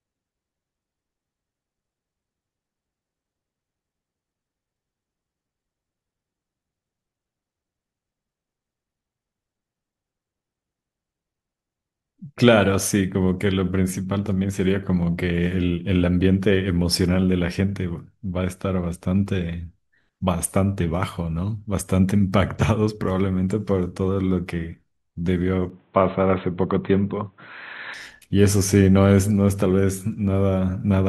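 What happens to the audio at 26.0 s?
From 25.7 to 27.94 s the sound turns dull and boxy, with nothing above 4.1 kHz, a faint new hiss about 40 dB down, the same level and no gap. The likely cause is the input switched to a poorer device; a plain filter wouldn't bring its own background noise.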